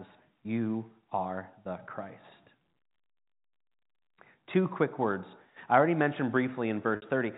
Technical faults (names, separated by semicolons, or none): packet loss with pitch repetition